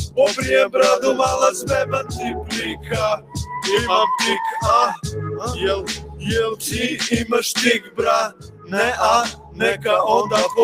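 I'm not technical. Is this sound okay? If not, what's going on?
No. A noise suppressor applied to music or sounds is on for the whole clip. It is a filter built for speech, so it treats steady tones, room sound and fading tails as background noise. Their level keeps rising and falling unevenly, by a large amount.

Sound cut by the noise suppressor happens at 1.58–2.51, 2.69–2.93, 3.17–3.58, 4.97–5.48, 5.89–6.28, 7.79–7.99, 8.28–8.73 and 9.31–9.85 seconds. In each stretch the filter mistakes the sound for noise and pushes it down, so it dips or dies away early.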